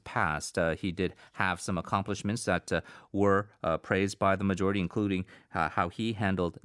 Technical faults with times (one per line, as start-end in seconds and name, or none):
none